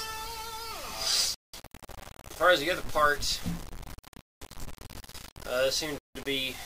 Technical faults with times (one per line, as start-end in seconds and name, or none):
0.00-6.66 low bit depth without dither
1.34-1.54 Bluetooth stall
4.21-4.41 Bluetooth stall
5.98-6.15 Bluetooth stall